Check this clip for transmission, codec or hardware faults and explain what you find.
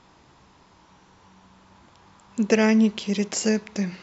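Nothing stood out as a fault on listening to this speech recording.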